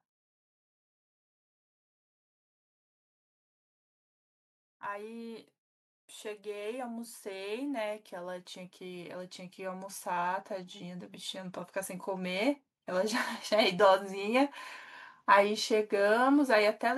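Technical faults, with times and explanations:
6.22–13.85 s, automatic gain rising: over roughly seven and a half seconds the level climbs by about 14 dB as the automatic gain control, judging the input too quiet, keeps turning its own gain up. What separates this from a talker simply speaking louder or moving closer is that the background noise floor swells in step with the speech, and the rise is a smooth, slow ramp rather than a step or sudden jump.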